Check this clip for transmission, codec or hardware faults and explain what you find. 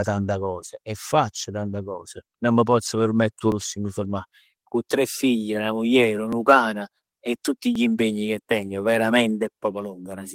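Two kinds of fault turn up here. At 3.52 s, between "m' pozz permetter 'o" and "lusso 'e m'", there's a jump, with the speech skipping ahead by roughly 30 ms. Smaller skips of around 10 ms follow at 6.33 s, after "tre figl 'na muglier", and at 7.76 s, right before "impegni che tengo". That's likely a dropped buffer (overrun): the samples got overwritten before being read, so the two sides butt together.

From 4.10 to 4.16 s there's a lost packet rebuilt from error correction. About 40 ms sounds rougher and noisier but has no gap, which fits two lost packets replaced by the low-bitrate copies the following packets carried.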